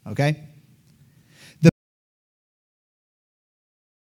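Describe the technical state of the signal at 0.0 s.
The audio is intact at 0.0 s, with no audible fault at that point.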